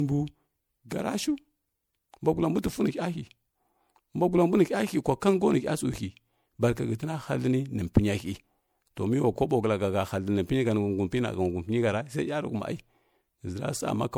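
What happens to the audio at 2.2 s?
At 2.2 s the speech has the same swirly, hollow smear it carries through the whole clip, with blurred attacks and nothing above 20.9 kHz. That's generation loss, likely from the audio going through MP3 a few times, around 96 kbit/s, each pass stacking fresh quantisation noise and spectral holes.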